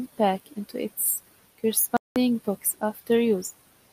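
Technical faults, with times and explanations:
1.97–2.16 s, digital broadcast dropout: the speech cuts to silence for about 0.19 s while the receiver mutes on bad frames, then resumes with that stretch gone.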